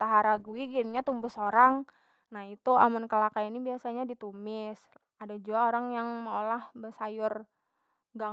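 From 0.37 to 1.89 s, just before "nah itu amun kalakai", a call bitrate drop from 48 to 10 kbps makes Opus code coarsely. The speech turns rough and watery, and the spectrogram shows thinned, smeared upper bands.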